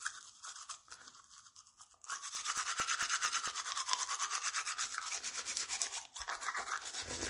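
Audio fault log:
throughout MP3 compression: The top end stops dead at about 10.6 kHz, and the quieter detail has a watery, swirling quality where faint components flicker in and out. This is likely a heavily squeezed MP3 encode, at a rate that fits something near 40 kbps. With so few bits, the encoder drops everything above a fixed cut-off and zeroes weaker frequency lines frame by frame, so the texture shimmers and sharp onsets smear.
2.13–3.70 s CD scratch ticks: A damaged patch on the disc corrupted more data on each rotation than error correction could repair, so the player patched or muted the affected samples. The result is eight brief ticks across this stretch, about five per second, each no longer than a couple of milliseconds. They repeat at a steady rotational rhythm, of uneven strength.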